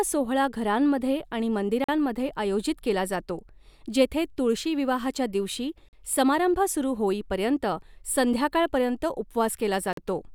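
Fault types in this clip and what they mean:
gap between chunks: Three short silent holes cut into the speech at 1.84, 5.89 and 9.93 s, each 44 ms long and spaced 4 s apart, because the audio was handled in 4-second chunks and silence was left at each join.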